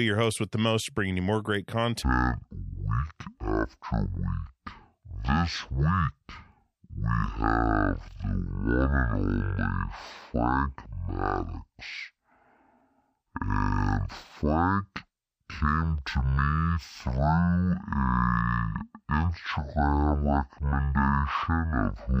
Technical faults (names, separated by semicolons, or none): stereo read as mono